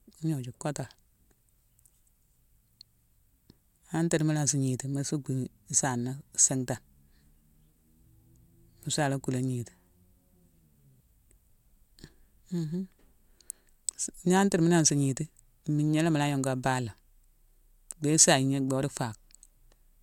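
A speech recording carrying clock slip clicks from 0.10 s to 19.98 s: faint, evenly spaced ticks at roughly a third of a second apart, about seventy in all, each a single-sample jump in the waveform. The steady spacing points to two devices likely running on independent, unsynchronised clocks about 100 ppm apart, so a sample is dropped or repeated each time the drift accumulates to one full sample. The ticks stand out most on louder, sustained passages.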